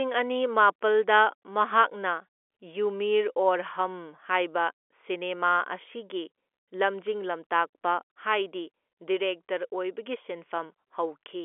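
No faults are audible anywhere in this speech recording.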